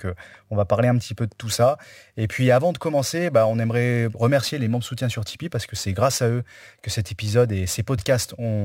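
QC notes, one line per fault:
1.46–8.65 s, crude rate conversion: From just after "petit peu de tout" to the end, a gritty, inharmonic fizz rides on the speech. Samples are repeated with no filter, which fits a 44.1 kHz to 48 kHz step. The error sits roughly 25 dB below the signal and tracks loud, bright sounds.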